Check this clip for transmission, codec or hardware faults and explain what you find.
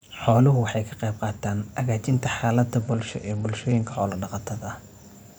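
One transmission fault is audible in this speech clip: a Bluetooth SBC bit pool drop from 2.82 to 3.95 s. The link seems to have congested, so the sender cut the SBC bit pool to keep audio moving. The sound fits a fall from 31 to 10, near 77 kbps. The highest sub-bands then get almost no bits. The rest are quantised coarsely. For just over a second the treble goes dull and gritty noise rises, then clarity returns.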